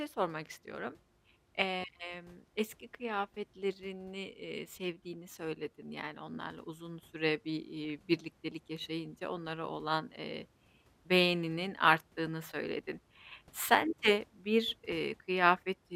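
From 7.81 to 7.90 s a short burst of burbling rides over the speech, the sound of DAB burbling. Weak reception let a small fraction of a percent of bits slip past error correction, putting short noise blips into individual MP2 sub-bands across nine frames.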